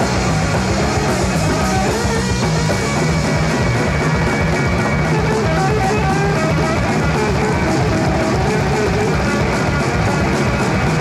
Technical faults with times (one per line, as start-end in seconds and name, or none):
none